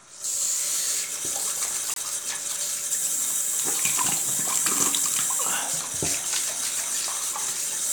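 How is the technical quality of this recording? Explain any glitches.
One glitch stands out. At 1.94 to 1.98 s the sound drops abruptly into about 40 ms of silence, consistent with two adjacent corrupt frames being muted by the decoder.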